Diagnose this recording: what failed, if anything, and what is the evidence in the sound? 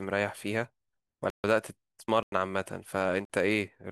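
The failure is at the driver or buffer stage: the speech drops into three blocks of digital silence, at 1.30 to 1.44 s (about 139 ms), 2.23 to 2.32 s (about 93 ms) and 3.25 to 3.30 s (about 46 ms). Each gap starts and ends abruptly, with no fade. The output buffer was likely not filled in time, so whole blocks went out as zeros. The lengths are multiples of 46 ms, which fits 2048-sample blocks at 44.1 kHz.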